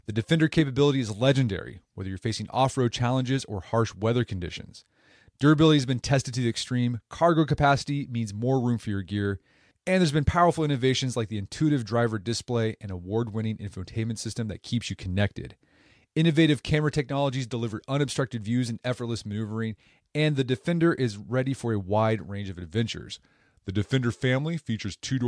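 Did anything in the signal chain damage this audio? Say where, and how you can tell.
Yes. The wrong sample rate at playback affects the last stretch, from 23.14 s to 25.28 s, right after "a wide range of". The voice drops by about 1.47 semitones and slows to 0.919 times normal speed, with pitch and tempo shifting together. That coupling means the samples were clocked out slower than they were captured, with no resampling, which fits 24 kHz material being played at 22 kHz.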